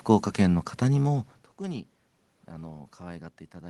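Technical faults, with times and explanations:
No technical faults are audible; the level shift around 1 s is the talker moving relative to the microphone, and the steady background is room noise.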